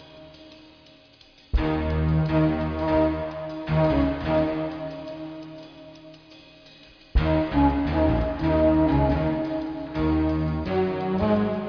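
No technical faults can be heard anywhere in this recording.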